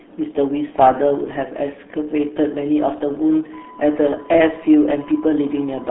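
From start to finish the speech sounds muffled and gargly, squeezed into a narrow band of roughly 250 Hz to 3.6 kHz, with nothing at all above 3.8 kHz, and it is heavily smeared by coding artefacts. This is the RealAudio 14.4 codec, the RealAudio 1 speech coder built for dial-up modems. Its low data rate, consistent with about 8 kbit/s, discards the upper spectrum and leaves the remaining detail coarse and bubbling.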